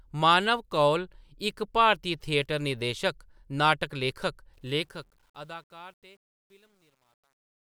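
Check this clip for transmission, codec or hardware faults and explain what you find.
One fault is audible, on the closing fade-out of this speech.

Truncation distortion on a fade runs from 4.54 s to the end at 7.66 s. The fade-out, which starts around 4.5 s, lowers the level in a stage that drops the low bits without dither, and the result fits roughly a 10-bit word. As the speech sinks toward the smallest step, the waveform collapses into coarse square steps. It is worst from 5.39 s onward, where the tail turns gritty.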